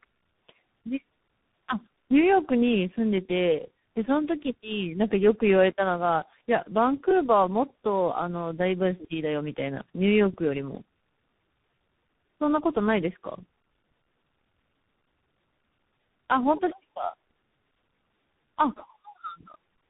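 Tandem speech coding runs throughout: the speech sounds like it passed through three speech coders in turn, likely iLBC, then G.723.1, then CVSD, each re-encoding the last one's errors. The result is rough, muffled and warbly, with nothing above 3.8 kHz.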